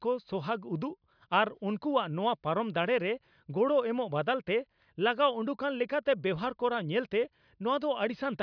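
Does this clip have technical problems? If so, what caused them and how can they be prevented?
No, there are no technical problems to hear in this speech recording. With nothing going wrong, there is no cause to trace and nothing that needs preventing.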